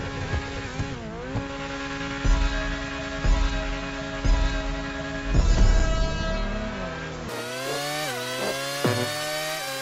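From 7.29 s to the end you get a wrong sample rate: the audio suddenly runs three times too fast and jumps up about 19 semitones, which fits 16 kHz material being played out at 48 kHz with no conversion, so speed and pitch shift together.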